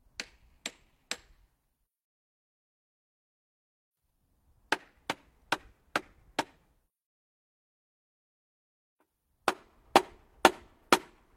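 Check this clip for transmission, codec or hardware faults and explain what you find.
No transmission, codec or hardware problem can be heard anywhere in the audio, and the signal holds steady throughout.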